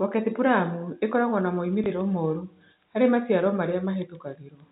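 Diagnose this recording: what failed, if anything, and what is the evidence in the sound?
A network fault dropped one packet of speech, and the receiver concealed the gap by replaying the previous packet. From 1.84 to 1.86 s, a 20 ms stretch of sound is heard twice in a row, which fits a 20 ms packet size. This is packet loss with the last packet repeated. Because it is a single repeat, the replayed chunk sounds like a small blip. The G.711 telephone coding of this speech keeps everything below 4 kHz.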